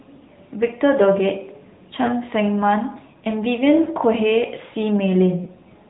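Speech passed through the AMR narrowband mobile codec at a mid-rate mode, consistent with about 10 kbps, so nothing above 4 kHz survives and the voice sounds plainly buzzy and synthetic. Lost AMR speech frames, each consistent with a single failed frame, made the decoder repeat its last settings at reduced gain, producing brief dips or warbles at 2.06–2.14 s, 3.84–3.88 s and 5.44–5.49 s.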